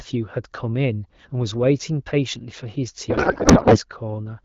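From 3.09 to 3.79 s, a codec payload misread, likely octet-aligned AMR frames unpacked as bandwidth-efficient, turns the AMR wideband speech into garbled, warbling noise.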